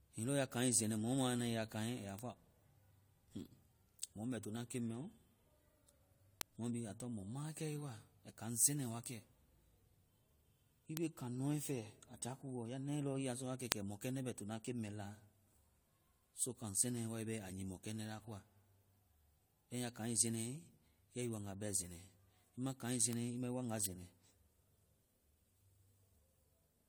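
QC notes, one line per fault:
Throughout, generation loss: swirly, hollow, smeared speech with softened attacks, likely from about three passes of lossy coding that fits AAC-LC near 64 kbit/s, each adding fresh quantisation damage.
2.19, 6.41, 10.97, 13.72, 23.13 and 23.86 s, bit error spike: a sharp broadband tick each time, unrelated to the speech, where a flipped bit briefly throws a sample value far off before it snaps back.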